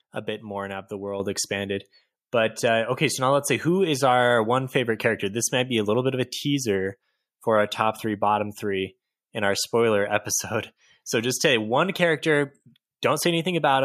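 At 1.2 s the microphone volume is stepped up: the call software judged the input too quiet and raised the device's capture level in a single jump of about 7 dB rather than easing it up. Because the change happens at the hardware input, the voice and the background noise floor both rise together at that instant, so the speech abruptly sounds louder, with no fade between the two levels.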